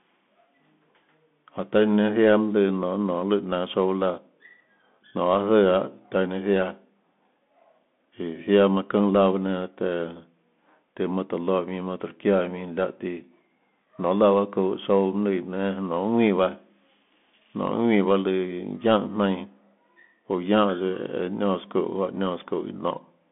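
From start to finish the speech carries the signature of a Bluetooth CVSD headset codec, which fits a 64 kbit/s narrowband link. The line passes roughly 200 Hz to 3.5 kHz, and nothing reaches above 3.8 kHz, so the audio sounds boxed and telephone-like. Damage is plainly audible: the one-bit delta coder's adaptive step lags fast, loud high content, making sibilants scratchy, and a granular hiss sits beneath the speech.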